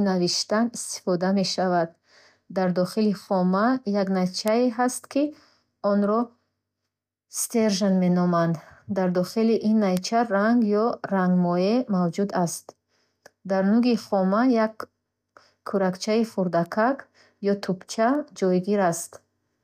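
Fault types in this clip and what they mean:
Bit error spike: a flipped bit knocks a sample or two away by a power of two and straight back, giving sharp ticks at 4.48, 9.97, 16.66 and 18.15 s, from about -3 down to -27 dBFS; waveform shows lone needles, spectrogram thin full-band vertical lines.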